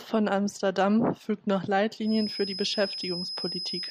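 From 2.0 s, just after "fügt noch", a feedback whistle enters and runs to the end of the speech: a thin, steady tone at 5.1 kHz sitting roughly 10 dB under the voice, its level swelling and fading slowly. The likely cause is a loudspeaker-to-microphone loop held right at the edge of feedback. What sets it apart from full howl-round is that it never builds into a howl, and the slow swelling and fading distinguishes it from a fixed electrical tone.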